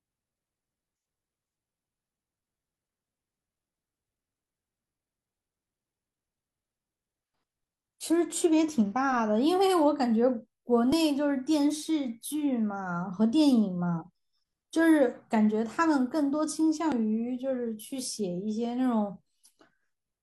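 At 10.92 s the speech jumps. About 21 ms of sound is missing, up to 10.95 s. The same thing happens again at 16.92 s, where about 37 ms is lost before 16.96 s. This is overlap between stream segments. The time stamps of adjoining 6-second segments overlap, so the player trims that span as if it were repeated, but it was not. The waveform breaks at each join. Each is heard as a click or a tiny skip.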